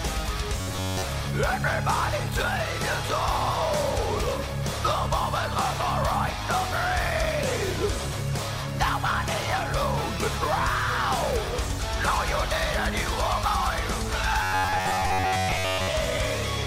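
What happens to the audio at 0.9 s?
Robotic sound from repeated short buffers runs from 0.61 to 1.05 s. Audio likely arrived too seldom, so a fragment of about 10.7 ms was looped over most of that span, imposing a rigid, metallic buzz at 93.8 Hz while the real audio was skipped.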